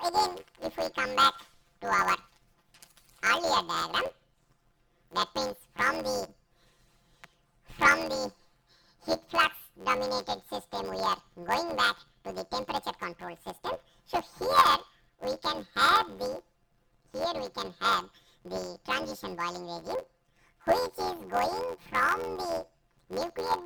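From start to finish, the audio carries a planar-read-as-interleaved fault. Each block stores all left samples, then all right samples. The player treats them as alternating left-right pairs instead. So each block plays twice at double speed, left half then right half. The blocks are short, about 11.61 ms, which fits a 512-sample block. That gives a robotic buzz at about 86.1 Hz. There is no clear octave shift.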